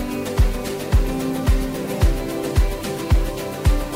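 Low bit depth without dither runs through the whole clip: the audio carries a distortion that tracks the signal and sits only about 25 dB below it. This likely comes from rounding to about 6 bits without dither, so quiet passages break up or sputter.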